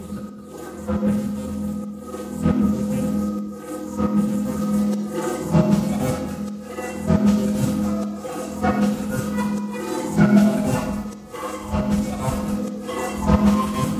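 No technical faults can be heard anywhere in this recording of sounds.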